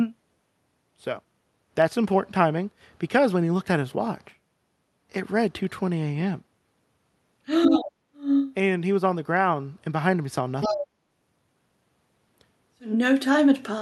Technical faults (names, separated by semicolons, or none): other side's voice leaking through; speech suppressed in double talk